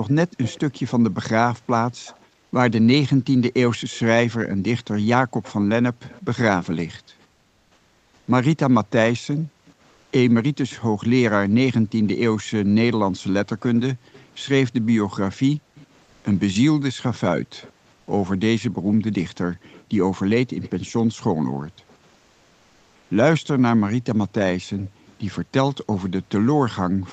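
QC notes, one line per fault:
Throughout, background gated by the echo canceller: while far-end audio plays out of the loudspeaker, the echo canceller pulls the microphone down hard, by as much as about 40 dB at its deepest. The room background dips or vanishes in those moments and returns once the canceller releases. This leaves the background pumping in and out instead of sitting steady under the sound.
0.43 to 6.21 s and 9.36 to 25.14 s, echo leak: a faint delayed copy of the sound trails behind it, about 179 ms late and roughly 20 dB down in the first stretch, then about 185 ms late and roughly 25 dB down in the second. It is likely that a loudspeaker at one end fed its microphone and the echo canceller there failed to remove all of it, so the residue travelled back across the call.
7.31 to 8.27 s, 9.91 to 10.11 s, 16.03 to 16.23 s, 17.99 to 18.07 s and 22.13 to 23.09 s, comfort noise in place of the background: the real background gives way to a smooth, featureless hiss for 960, 200, 200, 80 and 960 ms, about 2 to 5 dB quieter. 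The likely cause is Opus discontinuous transmission: the sender goes quiet when it detects no speech, and the receiver fills the gap with synthetic noise.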